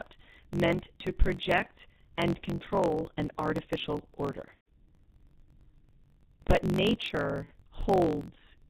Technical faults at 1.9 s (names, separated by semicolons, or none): G.723.1 codec; block size mismatch (truncated)